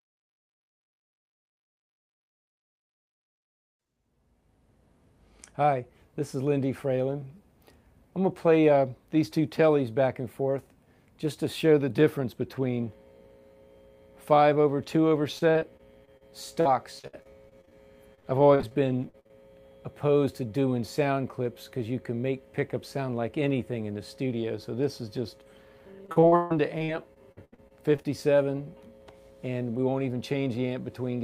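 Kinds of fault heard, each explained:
Repeated packet loss (robotic sound): chunks of audio keep arriving late or not at all, and each hole gets patched by stretching out the last bit of sound before the next dropout hits. You hear it as a choppy stutter in three runs: 3.38 to 3.95 s, 15.39 to 19.31 s, and 26.06 to 28.06 s. That last one is the roughest, with roughly a quarter of it filled in and one gap around 144 ms.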